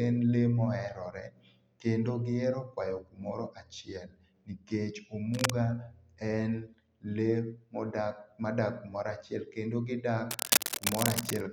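Cable scratch noise appears from 5.33 to 5.50 s and again from 10.31 to 11.43 s: bursts of dense, irregular scratching and rustling laid over the speech, roughly as loud as the speech itself. The likely cause is a worn cable, connector or control being moved, so that its contact resistance jumps about rapidly and injects ragged noise into the signal. The first burst is brief, while the second lasts just over a second.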